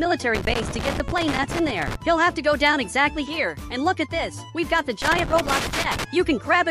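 From 0.35 to 1.95 s, and again from 5.02 to 6.04 s, the audio breaks into loose connector crackle: an irregular scratching burst as a worn or dirty contact rapidly makes and breaks, chopping the signal on and off. On the waveform this shows as ragged dropouts and sharp spikes, while a spectrogram shows scattered vertical broadband streaks across both spans instead of a steady noise band.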